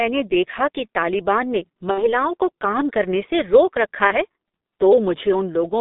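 Throughout, the G.723.1 codec narrows the speech to a 200 Hz to 3.7 kHz telephone band. At 6.3 kbit/s, heavy coding makes it muffled and hoarse, with smeared consonants.

From 1.91 to 2.16 s, after "देखा कि तालिबान ने", VoIP packet loss is concealed by the speech codec. The decoder extends its last sound into a fading buzzy tone or coloured noise, which fits roughly 60 ms lost. The speech stays weak until "को काम करने से".

From 4.07 to 4.15 s, just after "करने से रोक रखा", a shorter concealed loss smears briefly into a fading buzzy tone or coloured noise. This points to about one 30 ms frame dropped.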